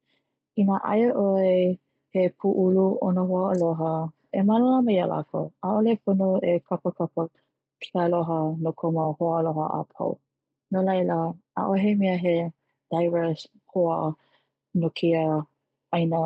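Nothing here stands out as a fault; it's simply speech carried over a call link, with the top end stopping around 8 kHz as you'd expect from a codec running in that bandwidth.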